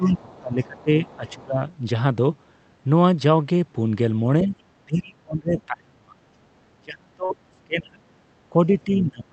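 From 0 to 1.63 s the speech dips. The deepest drop is about 25 dB. This is speech suppressed in double talk. The echo canceller was likely unable to separate the near talker from loudspeaker echo, so it turned everything down.

Inside that stretch, faint scraps of another voice come through at 0.05 to 0.15 s, 0.78 to 0.83 s and 1.09 to 1.35 s. They sit about 25 to 30 dB below the speech. This is the other side's voice leaking through, likely residual echo the canceller missed.

The suppression returns at 4.43 to 4.53 s as a brief dip of about 10 dB. It comes back harder at 4.78 to 6.18 s, 6.77 to 8.04 s and 8.50 s to the end. In those stretches the speech falls by about 35 dB.

At 7.25 to 7.31 s, within that suppressed stretch, there is a brief smear. This is short concealed packet loss. About 40 ms of audio never arrived. The decoder filled the gap by extending the preceding sound, then blended back into the real audio.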